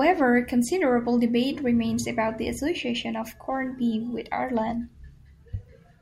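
Speech, with no technical faults.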